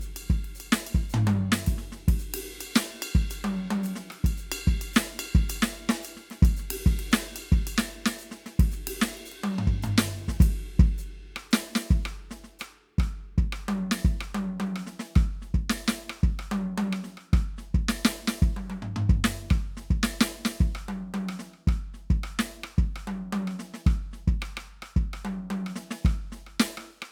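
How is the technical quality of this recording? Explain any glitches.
No faults or glitches occur.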